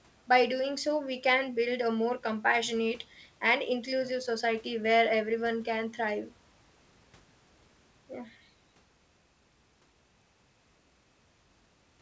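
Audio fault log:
No faults heard.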